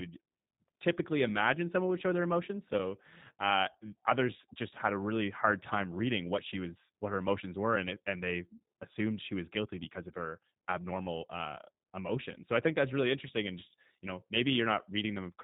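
Speech throughout, and the whole thing carries the sound of G.729A. Everything above 4 kHz is gone, so there's no sibilance sparkle, and the codec damage is plainly audible as a rough, slightly synthetic edge. That comes from the decoder rebuilding the speech out of a vocal tract filter, a pitch predictor and a handful of pulses per 5 ms half-frame instead of the actual waveform. The thinness fits the 8 kbit/s that G.729 runs at. On top of that there are two spots of VoIP packet loss concealed by the speech codec, at 3.79 to 3.85 s and at 11.84 to 11.86 s. Each sounds like roughly 20 ms of audio went missing, which fits a single lost packet. The decoder fills the gap by stretching its last pitch and filter into a brief buzzy or tonal smear. The first one trails on longer because each frame builds on the previous one, so the sound stays a bit weak and off for a moment after the packets come back.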